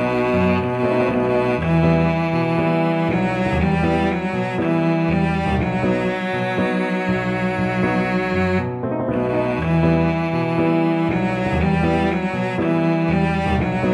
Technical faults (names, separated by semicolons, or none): none